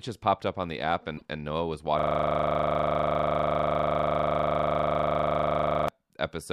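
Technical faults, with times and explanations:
1.14 to 1.22 s, damaged data in a compressed stream: just after "up on the app", an 80 ms stretch of the compressed stream was corrupted, so the decoder could not read those frames correctly. While it misread them and lost frame sync, it produced a short glitch in place of the intended audio. Normal playback resumed once it found the next valid frame header and re-locked to the stream.
1.99 to 5.88 s, system hang loop: for almost four seconds the same 40 ms slice of audio repeats exactly, close to a hundred times. The host or audio driver stalled while the sound hardware kept replaying one region of its ring buffer. Because the loop restarts 25 times per second, the repeats merge into a coarse, rattling buzz at 25 Hz. The speech itself does not move forward at all until the stall clears.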